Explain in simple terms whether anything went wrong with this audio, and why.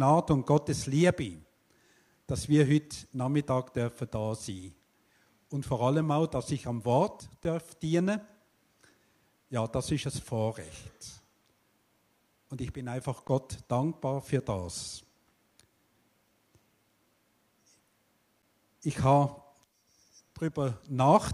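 Three underruns with held sample, at 7.44, 13.28 and 18.42 s. Each time the sound briefly freezes flat for about a hundredth of a second, then resumes with a little audio lost.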